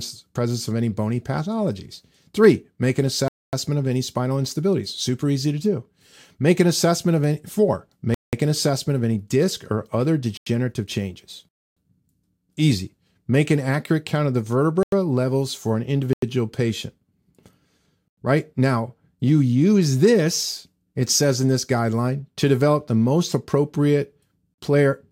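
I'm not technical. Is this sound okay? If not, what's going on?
No. The speech keeps dropping out for a split second. Each dropout is a block of digital silence: a stretch of the recording is replaced by total silence. It happens at 3.28, 8.14 (after "assessment of any four"), 10.37 (after "any disc or other"), 11.49, 14.83, 16.13 (after "levels for an"), 18.08 and 24.54 seconds. Each gap lasts between about 0.04 and 0.28 seconds. This usually happens when the playback or recording software falls behind.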